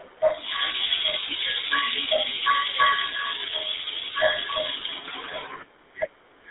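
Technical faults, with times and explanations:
throughout: GSM full-rate codec. The speech is confined to roughly 300 Hz to 3.7 kHz and carries a plainly audible buzzy, gravelly roughness. The coarse pulse excitation of a 13 kbps vocal-tract coder causes this, which sets it apart from clean band-limiting alone.
1.68–1.72 s: GSM bit errors. A brief squawk with a gargling pop breaks through, which fits a couple of corrupted frames whose filter, pitch or gain values were mangled. It produces a distorted burst, not the silent gap of a dropped frame.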